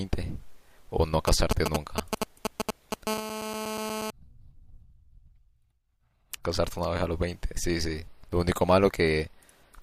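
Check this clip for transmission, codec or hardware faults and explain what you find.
Two faults from a nearby 2G handset are audible in this speech clip, one running straight into the other.

From 1.28 s to 3.08 s there are GSM signalling bursts. The phone is exchanging short bursts of control traffic with the network, and the audio circuitry rectifies the radio pulses into the signal. The result is an irregular, galloping run of clicks and brief 217 Hz buzz fragments, roughly as loud as the speech itself. They differ from the steady buzz that follows because they come in broken groups rather than as a continuous tone.

From 3.08 s to 4.10 s the pattern becomes GSM phone buzz. The handset has moved into a call and now transmits bursts without a break at about 217 per second. Rectification of those pulses produces a hard, rasping 217 Hz buzz rich in harmonics, sitting about 6 dB below the speech and unrelated to it. 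Mains hum at 50 or 60 Hz is lower in pitch and smoother, and this buzz does not follow the speech.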